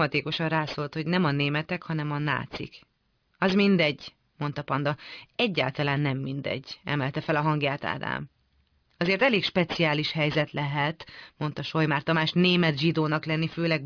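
Aliasing runs through the whole speech clip: the rate was cut, which fits a drop from 48 kHz to 11 kHz, without filtering, so content above 5.5 kHz folds back as gritty, metallic sibilance, roughly 20 dB down. A spectrogram shows mirrored energy packed hard against 5.5 kHz.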